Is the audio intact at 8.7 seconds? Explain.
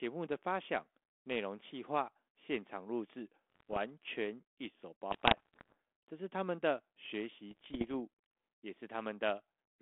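Yes, the audio is intact at 8.7 seconds, with the speech passing through its 32 kbit/s G.726 telephone channel without any fault at that moment.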